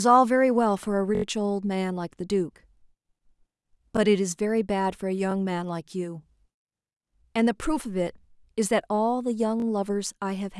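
Repeated-buffer stutters occur at 1.15, 3.97, 5.31 and 9.60 s. A 21 ms chunk, consistent with a 512-sample buffer, replays with hard joins, four times at 1.15 s.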